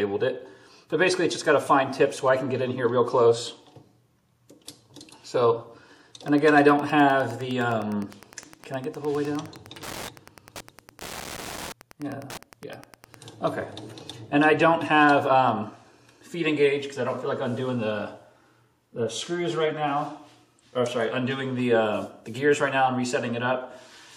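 From 6.21 s to 13.17 s there's Wi-Fi interference: a steady ticking, close to ten clicks a second, sitting roughly 20 dB under the sound. A Wi-Fi radio near the audio circuitry sends out a beacon every 102.4 ms, and the circuit rectifies those RF pulses into audible ticks, so you get that regular, almost clock-like pattern. It comes in at 6.21 s and stops cleanly at 13.17 s.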